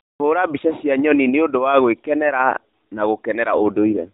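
A speech clip carried over a narrowband mobile link, with nothing above 4 kHz. From 3.58 s to 4.11 s an AMR rate drop makes the voice rougher and more synthetic, which fits the codec stepping from 12.2 kbps down to 5.9 kbps. On a spectrogram the 4 kHz ceiling holds with no gap, but the harmonics turn smeared and blotchy.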